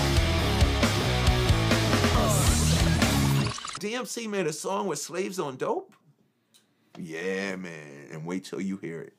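Chunks out of order at 1.01 to 1.06 s: an 11.6 ms block plays three blocks late, leaving a brief jumbled flicker at the hard joins.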